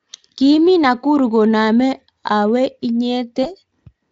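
A speech recording carries one fault of VoIP packet loss concealed by the speech codec, from 3.43 to 3.50 s. The gap fits a single lost 20 ms frame. The decoder fills it by extending its last pitch and filter at falling gain. That gives a brief buzzy or noisy smear in place of the missing sound. Because each frame builds on the previous one, the weakness lingers for tens of milliseconds after packets return. The Speex coding itself leaves little or no audible damage.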